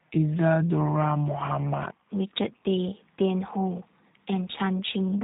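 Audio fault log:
Throughout: G.729 codec. The speech is dull and boxed-in, with nothing above about 3.8 kHz, and it has a plainly audible rough, slightly synthetic buzz. The coder discards the original waveform. For each 10 ms frame it sends only a vocal tract filter shape, a pitch value and a few sparse pulses, and the decoder rebuilds speech from those pieces. The narrow band and coarse texture fit a G.729A stream at about 8 kbit/s.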